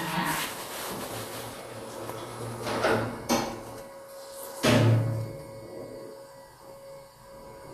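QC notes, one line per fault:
Throughout, USB whine: a steady fixed-pitch tone at 1 kHz sits about 40 dB under the sound, the 1 ms frame rate of the USB bus leaking in through power or ground. On a spectrogram it is a thin unbroken horizontal line at 1 kHz across the whole clip.
Throughout, Vorbis compression: plainly audible grainy hiss in the treble, roughened tones and smeared attacks, likely from low-bitrate Vorbis coding, which quantises fine high-frequency detail into noise of similar energy. A spectrogram shows a hard ceiling with nothing above 14.2 kHz and blotchy, speckled upper bands.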